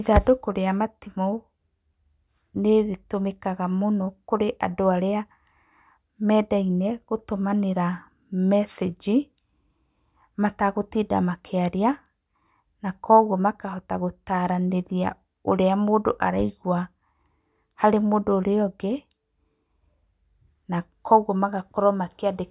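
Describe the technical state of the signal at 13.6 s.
At 13.6 s the speech signal is intact, with no dropout, click, distortion or other fault audible at that point.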